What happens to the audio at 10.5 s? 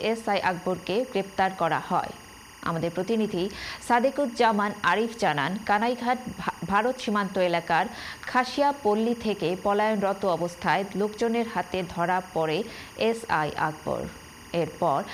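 At 10.5 s, as throughout the clip, timecode bleed sits about 20 dB under the sound: a 24-frame timecode square wave flipping near 1 and 2 kHz leaks in, giving a steady chirping warble. A spectrogram shows constant bands at both frequencies.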